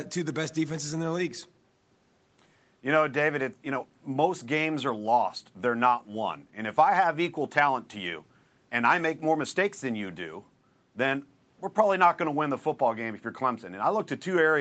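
No technical faults are audible.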